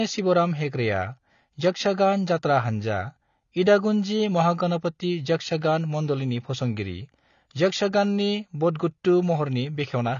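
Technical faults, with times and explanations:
Throughout, AAC compression: the speech has plainly audible codec damage and nothing above 6.9 kHz, sounding dull and smeared with a fizzy edge. The likely cause is low-bitrate AAC-LC, fitting about 24 kbps, where the encoder lowers its cut-off and leaves spectral holes.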